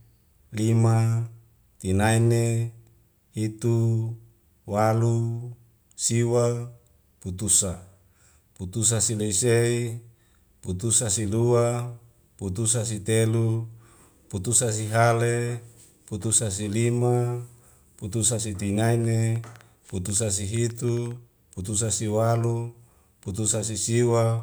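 After "si lima putusa si", a train of clicks from 18.86 to 21.12 s, roughly fifteen irregular ticks at about 6.2 per second, reaching the speech level, likely interference; these appear as thin vertical lines on a spectrogram and sharp spikes in the waveform, ending before "putusa si walu".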